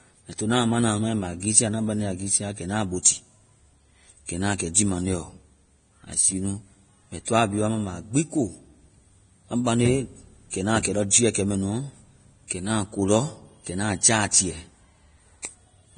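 It's a speech recording with a grainy, hissy quality all the way through and nothing at all above 9.7 kHz. That's heavy damage, most likely from Vorbis compression at a low bitrate, something around 24 kbps judging by how coarse the treble sounds. There's also pre-echo, a short smear of hiss just ahead of sharp onsets, because the codec spreads each block's noise back before the attack. You can hear it at 3.03 to 3.05 s, at 4.74 s between "na kɛ" and "jii maŋde ɔ", at 10.83 to 10.85 s before "kɛ lɔ jiiɛ kɛmɛnuɔ", at 11.10 s between "kɛ lɔ" and "jiiɛ kɛmɛnuɔ", at 14.31 to 14.33 s, and at 15.42 to 15.45 s.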